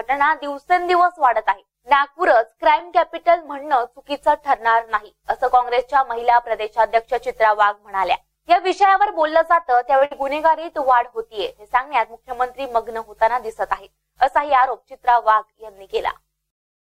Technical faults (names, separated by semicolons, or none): short stall from a late packet; burst of packet loss